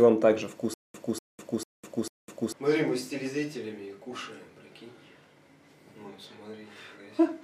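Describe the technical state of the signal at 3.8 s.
Nothing is wrong with the signal at 3.8 s; it runs through that moment without any dropout, click, distortion or other audible fault.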